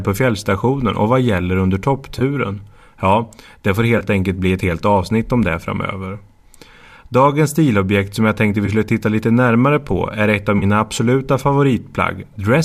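AAC frame loss with concealment in this speech recording at 2.19 to 2.22 s, 3.98 to 4.03 s, 8.66 to 8.69 s and 10.59 to 10.64 s: brief smeared, phasey patches of about 20 to 30 ms where the decoder patched gaps from the last good spectrum, consistent with two or three lost 10 ms frames, likely from low-delay AAC at 64 kbps.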